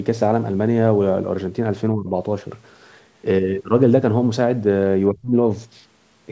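At 1.93–2.11 s the speech dips about 15 dB, then nearly vanishes at 5.12–5.33 s, about 35 dB down. This is likely speech suppressed in double talk by an echo canceller.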